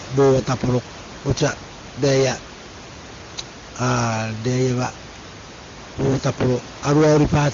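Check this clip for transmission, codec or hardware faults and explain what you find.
Nothing stood out on listening to this speech clip that would point to a problem in transmission, coding or hardware.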